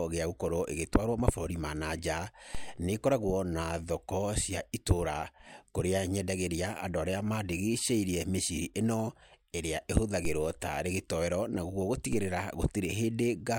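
Speech with three DC steps at 2.55, 10.25 and 12.13 s, each a low thump as the waveform's zero line jumps about -25, -25 and -28 dBFS, then decays through a roughly 2 Hz high-pass. On a spectrogram each shows as a brief low-frequency flash at the bottom edge.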